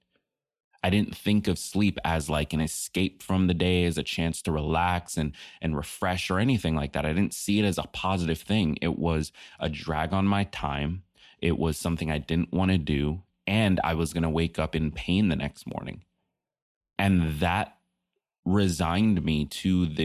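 Speech recording with no technical faults audible anywhere in the clip.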